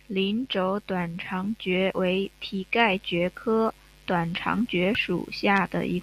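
A speech clip with two brief glitches from damaged data in a compressed stream: a blip from 1.90 to 1.92 s, between "轴短肠蕨" and "为蹄盖蕨", and another at 4.95 s, just after "科短肠蕨". Corrupted bytes there made the decoder misread frames and lose sync until it found the next valid frame header.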